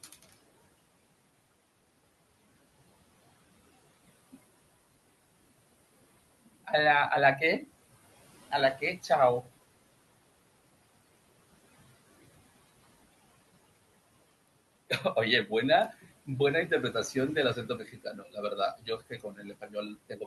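Across the whole recording there are noise suppressor artifacts. The suppressor pulls the steady background down by about 19 dB wherever it judges a band to be noise, frame by frame. The room noise, which sits about 18 dB under the speech, drops away between phrases and returns beneath them. This sets it apart from compressor pumping: the level changes follow the frequency bands the suppressor treats as noise, not the overall loudness.

Speech cut by the noise suppressor occurs four times. From 0.04 to 0.34 s, soft speech is pushed down by up to about 17 dB, for roughly a tenth of a second in total. From 8.77 to 9.1 s, a similar short stretch dips by up to about 11 dB. From 17.55 to 18.37 s, about half a second of speech falls by up to about 18 dB. From 18.78 s to the end, the speech sinks by up to about 16 dB. Each time, the quiet parts of the speech were taken for noise and turned down with it. 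They sound swallowed and faint rather than abruptly silent, which distinguishes this from a packet dropout.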